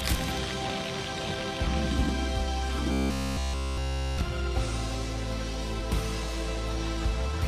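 At 2.74 to 2.78 s and again at 5.76 to 5.80 s the audio breaks up briefly from damaged data in a compressed stream. Corrupted frames there confuse the decoder, which loses sync and hunts for the next valid frame header, leaving a short glitch.

From 2.92 to 4.22 s the sound turns into a rigid, metallic buzz at 66.8 Hz throughout that stretch. This is likely robotic sound from repeated short buffers: one roughly 15 ms block is replayed while new audio is skipped, and that fixed repeat rate sets the buzz.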